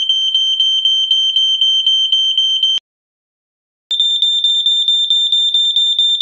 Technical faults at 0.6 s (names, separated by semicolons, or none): none